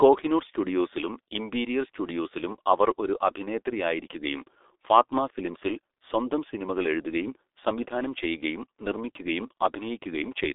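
From start to finish the speech carries G.723.1 codec damage, and it is heavy. Nothing reaches above 3.8 kHz, and the band runs from about 300 Hz to 3.6 kHz, so the voice is muffled. A plain telephone bandwidth limit would sound clean inside that band. Here the voice is also hoarse and consonants smear, because the codec rebuilds speech from a coarse model refreshed only every 30 ms. That points to its 6.3 kbit/s mode.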